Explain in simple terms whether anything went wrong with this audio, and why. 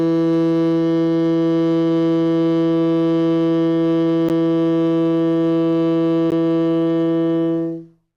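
The music briefly cuts to silence at 4.29 s and 6.30 s, each hole about 12 to 15 ms with sharp edges. This is a gap between stream segments: the 1-second chunks were timed slightly apart, so the player filled the space with silence. Unlike a dropout, no music is lost.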